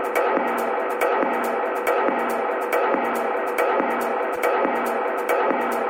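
At 4.35 s, lasting about 30 ms to 4.39 s, there is a short concealed packet loss. Around 20 ms of the stream failed to reach the decoder in time, and the receiver bridged roughly 13 ms of it by extending the preceding sound before crossfading back into real audio. It registers as a fleeting smear or wobble. Unlike a digital click, the gap is papered over with continued, slightly blurred sound.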